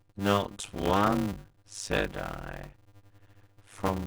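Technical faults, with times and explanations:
throughout, block size mismatch (padded): each block written is shorter than the block read, which fits 256 samples going into 480, so zeros fill the remainder. The regular gaps buzz at 100 Hz, and the speech runs at 0.533 times normal speed, with its timbre kept.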